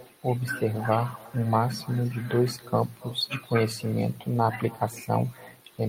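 Right through the speech there's echo with no canceller: your own voice returns roughly a third of a second later, about 24 dB down, thin, picked up off the far end's loudspeaker.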